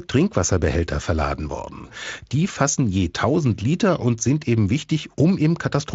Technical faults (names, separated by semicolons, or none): none